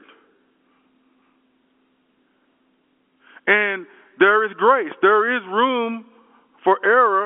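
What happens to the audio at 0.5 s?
Nothing goes wrong at 0.5 s: the speech passes through intact, carrying only the narrow band of G.711 telephone coding with nothing heard above about 3.8 kHz.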